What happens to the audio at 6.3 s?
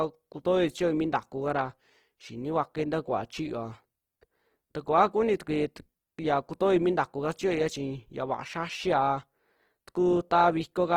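At 6.3 s the speech carries plainly audible grainy, rough texture, likely from low-rate Opus compression in its CELT mode, present throughout the clip. Starved bands are refilled with folded or noisy content, fitting about 16 kbps. A spectrogram shows smeared, noise-like upper bands with few holes, extending to about 20.2 kHz.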